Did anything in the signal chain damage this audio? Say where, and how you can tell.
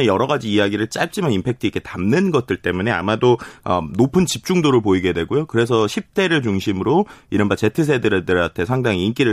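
No, nothing damaged it.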